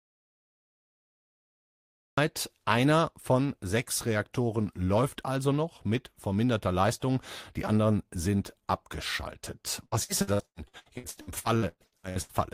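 A speech recording whose input was likely lost before it began, through a disconnected device, broken link or mute, while the recorder kept writing silence: an audio dropout to silence runs from the start to 2.18 s, dead silence with no room tone before speech enters mid-flow. From 9.85 to 12.32 s, just after "die anderen sind abgeschaltet", repeated packet loss leaves 17 gaps, the longest 119 ms, each patched by stretching the preceding sound. About 45% of that span is filled this way, so the speech turns choppy with pieces missing.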